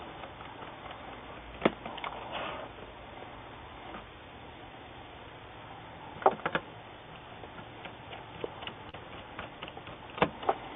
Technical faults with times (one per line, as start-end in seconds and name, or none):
8.89-8.95 short concealed packet loss